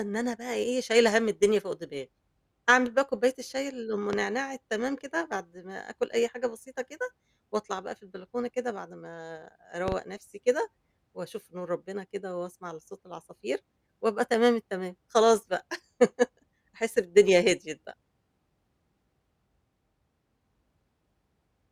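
A speech recording with two loud pops. The first, a single sharp pop from 4.13 to 4.16 s, peaks about 15 dB above the speech. The second, from 9.88 to 9.95 s, is a quick double pop about 10 dB above it. The speech continues unbroken beneath both. The cause is likely a brief voltage step or pulse entering the signal path, such as a switch, connector or static discharge, which the following circuitry shaped into a short thump.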